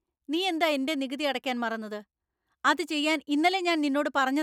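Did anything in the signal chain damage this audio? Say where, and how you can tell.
No, nothing is damaged.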